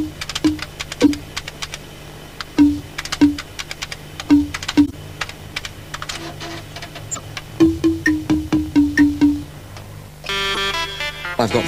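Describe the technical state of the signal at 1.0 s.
A glitch, peaking around -5 dBFS, cuts in from 1.02 to 1.10 s. It is a corrupt frame decoded: flipped bits in a few consecutive compressed frames were played anyway, and misread gains and codes scattered energy into wrong frequencies for the span of those frames.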